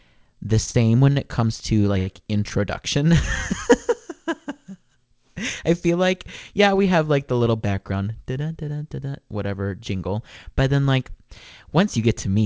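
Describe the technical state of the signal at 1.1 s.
At 1.12–1.18 s, just before "it comes to", a short stall from a late packet holds the preceding sound for about 43 ms. Unlike a dropout, nothing is lost; speech resumes from where it paused, just later.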